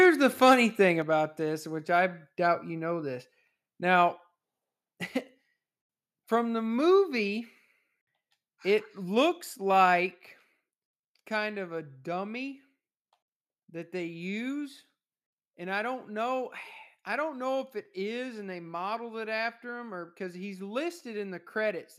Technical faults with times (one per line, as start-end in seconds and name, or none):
0.02-0.54 microphone overload
1.02 microphone volume stepped down